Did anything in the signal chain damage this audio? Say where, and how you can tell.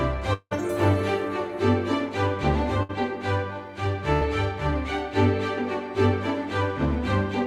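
Yes. At 0.33 s the music breaks off. The last sound is held as a fading buzz or hiss, then about 40 ms of silence follows. Playback returns at 0.53 s with roughly 180 ms missing. This is likely a long network dropout.

Two shorter gaps sit at 2.83 to 2.91 s and 4.13 to 4.23 s. Each is a burst of packet loss on the network. The receiver extends the last sound and fades it. It covers 60 ms, then 80 ms. The music resumes past the lost part.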